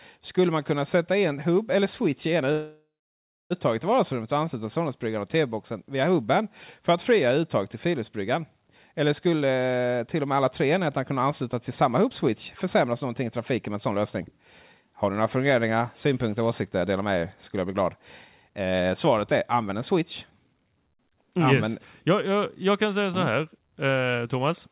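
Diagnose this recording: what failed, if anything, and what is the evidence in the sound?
Call audio freeze, at the network and jitter-buffer stage. Right after "eller switch i ena" the sound stops at 2.52 s and resumes at 3.52 s. Of that one-second hold, about 0.62 s is plain silence, after a brief decaying continuation of the last sound. The speech picks up exactly where it left off, so a gap was inserted rather than audio lost. That is the difference from packet loss concealment. The likely cause is delayed packets draining the jitter buffer.

Jitter buffer speed-up, in the receiver's playout stage. From 9.27 to 15.17 s, ending just before "några funderingar synpunkter och", the speech runs about 7% fast, with roughly 0.4 s trimmed. Further bursts follow the same words: 16.61–17.97 s at 108%, 18.48–18.87 s at 114%, and 19.32–20.70 s at 108%, each shedding around 0.1 s or less. Pitch stays unchanged, which rules out a sample-rate mismatch. 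The buffer is cutting pitch periods to reduce excess delay.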